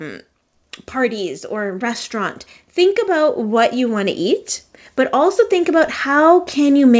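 Automatic gain rising from 0.93 to 4.48 s, and again from 5.11 s to the end: the gain control judged the speech too quiet and lifted its gain slowly, by about 7 dB the first time, so voice and background swell together over the G.722 call path's 8 kHz band.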